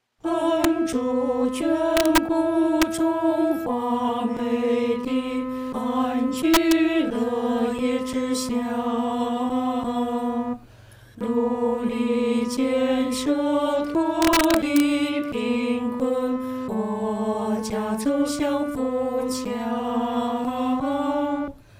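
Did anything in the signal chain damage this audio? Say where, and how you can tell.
Yes. Integer overflow at 0.64 s, 1.97–2.18 s, 2.82 s, 6.54–6.72 s and 14.22–14.80 s, in a fixed-point gain or format-conversion stage. Peaks pushed about 1–2 dB past full scale wrapped to the opposite sign instead of being limited, producing violent cracks far harsher than clipping.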